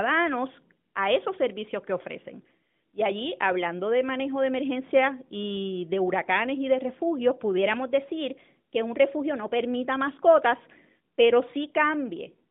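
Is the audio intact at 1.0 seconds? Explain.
Yes, at 1.0 seconds the audio is intact, with only the ordinary narrowband telephone-band sound of the AMR narrowband mobile codec carrying it.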